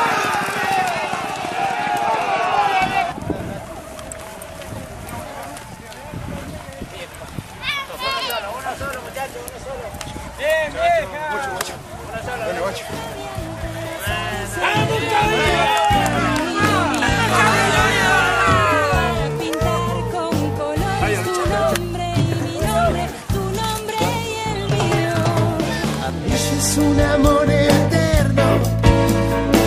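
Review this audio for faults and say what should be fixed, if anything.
Nothing needs fixing here.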